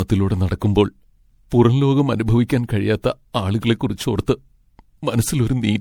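Throughout the speech, the sound shows generation loss, most likely from being passed through MP3 encoding and decoding about four times, with a character that fits a 96 kbit/s setting. Each pass re-quantises the signal on a shifted frame grid, so the coding noise and missing spectral slices pile up. The result is swirly, smeared and hollow, more degraded than one encode at that rate would leave, with blurred attacks and nothing above about 20.7 kHz.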